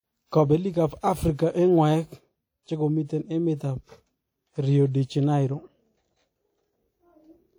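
From the first second to the last, the speech carries a smeared, ringing edge. Consonants trail off into a washy haze. A hiss rises and falls with the voice. This is plainly audible codec damage, likely from WMA compression in its first version. The encoder works on long transform blocks, so quantisation noise spreads over tens of milliseconds around each sound. The damage fits a bitrate near 48 kbps. The band still reaches about 20.1 kHz.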